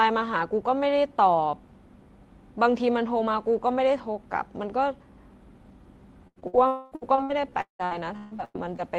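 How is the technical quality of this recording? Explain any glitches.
The last third of the speech is heavily damaged by network loss. From about 6.3 s to 8.8 s the audio breaks up repeatedly. Before that, the call codec's coding noise and its band limit near 12 kHz can be heard, which fits an Opus call around 32 kbps.

Burst of packet loss, at 6.27 to 6.39 s and 6.47 to 6.56 s. Several packets in a row failed to arrive in time. About 80 ms is missing in the first gap and about 60 ms in the second. The receiver stretched the last sound and faded it out. You hear a brief held buzz or hiss. The speech then resumes further on, with a piece skipped.

Short concealed packet loss, at 6.40 to 6.44 s. Roughly 20 ms never reached the decoder. The receiver bridged the hole by continuing the preceding sound and blending back into the real signal. The result is a quick smear or wobble squeezed between the two bursts. 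It is short enough to blur a consonant.

Lost packet rebuilt from error correction, at 6.42 s and 6.53 s. Each time, one 20 ms packet went missing. The following packet carried a low-bitrate backup copy, and the decoder played that copy instead. So there is no gap here. Instead there is a short patch of rougher, noisier sound.

Long network dropout, at 6.67 to 6.94 s. About 240 ms of audio is missing. The gap was likely caused by a stall in the network. The receiver continued the last sound as a fading buzz or hiss across the whole stretch. It never falls to full silence. The speech then returns with that section gone.

Repeated packet loss (robotic sound), from 6.95 to 8.80 s. Packets dropped again and again, with nine gaps in all. The longest gap is about 178 ms. Roughly a third of this stretch is concealed, and some of it is patched from error-correction copies. Each patch is followed quickly by another. 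The speech turns choppy, with fragments missing throughout.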